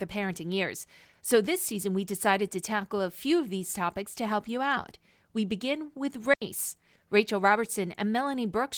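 Speech with a digital wireless dropout from 6.34 to 6.42 s, right after "begin with": the receiver mutes for 80 ms, leaving a clean near-silent gap with no noise burst, seen as a blank vertical strip on the spectrogram and a flat waveform, over light Opus voice compression.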